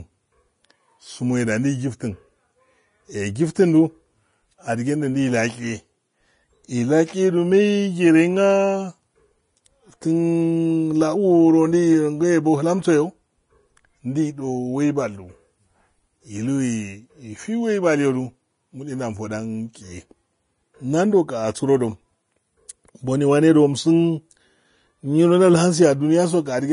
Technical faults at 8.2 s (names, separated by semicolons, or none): low-bitrate audio saved at a high bitrate